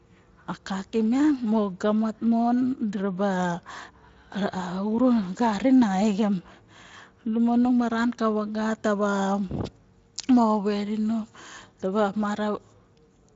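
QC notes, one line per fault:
No faults found in this speech clip. The Speex codec path leaves only light coding texture, with nothing above about 7.6 kHz, which fits a wideband setting of around 24 kbps.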